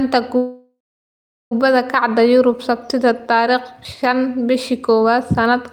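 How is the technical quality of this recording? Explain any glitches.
The recording has two glitches: a long stall near the start and a brief skip later.

From 0.37 to 1.53 s there is a call audio freeze, likely from delayed packets draining the jitter buffer. The last sound is stretched into a fading buzz or hiss, then about 0.79 s of silence, before the speech resumes where it stopped. On a spectrogram it appears as smeared, decaying bands followed by a blank stretch.

At 3.85 s, audio is missing between chunks. A piece of roughly 50 ms is likely dropped where processing switches blocks, and the two sides are butted together, so the speech jumps forward. The waveform shows an abrupt discontinuity, and the spectrogram shows a vertical seam.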